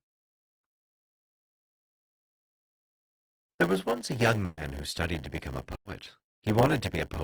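From start to end, a block size mismatch (padded) inserts zero gaps in each block. This causes a 100 Hz buzz and playback about 8% slow.

At 4.45 to 4.59 s, a burst of packet loss is concealed by a fading continuation lasting about 120 ms. The skipped 120 ms of sound never returns. At 5.75 to 5.87 s, a second burst fills 100 ms and drops to silence for about 80 ms. The audio then resumes 100 ms further on.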